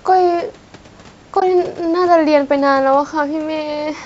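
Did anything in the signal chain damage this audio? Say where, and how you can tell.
Yes, codec stage: a soft-edged hole at 1.40 to 1.42 s. That's AAC frame loss with muting, zeroed frames faded by overlapping windows, fitting two frames.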